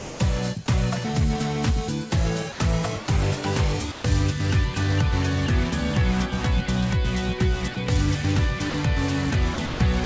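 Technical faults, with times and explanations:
0.00–0.20 s, 2.52–2.60 s, 3.06–3.08 s, 3.92–4.04 s, 7.74–7.76 s, 8.70–8.74 s: sound dropped by the voice detector. Brief gaps, from 20 to 200 ms, fill with steady comfort noise. This is likely the detector mistaking quiet sound for background.
9.54–10.06 s: sound chopped by the voice detector. The detector likely toggled repeatedly, so about 200 ms becomes synthetic noise and the ending sounds choppy.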